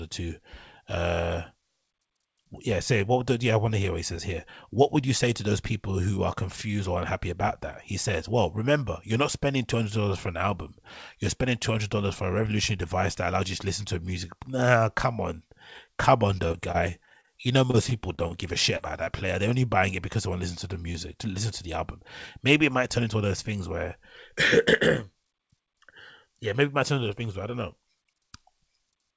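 Repeated packet loss (robotic sound) affects this speech recording from 16.48 to 17.29 s and again from 17.71 to 18.35 s, just before "give a shit". In each stretch, holes of up to about 30 ms arrive one after another. Each is patched by extending the preceding sound, so roughly a sixth of each span is synthetic fill, giving a choppy texture with fragments missing. Short concealed packet loss follows at 18.77–18.81 s, right after "give a shit", at 19.05–19.08 s, and at 20.92–20.96 s, between "to the" and "to listen to the". In each case about 20 ms of audio failed to arrive in time, and the receiver bridged the hole by continuing the last sound before fading back into real signal. The result is a brief smear or wobble. All of this passes through a call path whose band stops at 8 kHz, which fits a wideband codec such as G.722.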